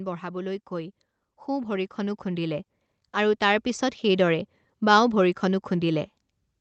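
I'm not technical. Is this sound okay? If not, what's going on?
No. From 0.05 to 0.69 s there is automatic gain falling: the level control judged the input too loud and turned it down slightly, so everything dips. From 0.68 to 4.32 s there is automatic gain rising: the control then judged it too quiet and turned it up steadily, so the speech and its background swell together over several seconds.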